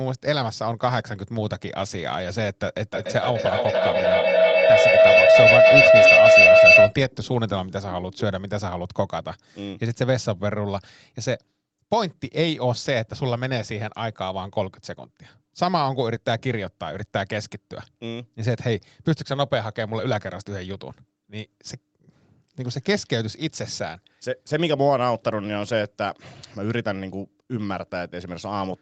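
From 2.93 to 7.0 s a feedback howl builds as the loudspeaker-to-microphone loop gains level on each pass. It narrows to a tone near 700 Hz, with the loop repeating about every 0.3 s, and peaks about 11 dB above the speech. Unlike echo, the repeats grow rather than fade.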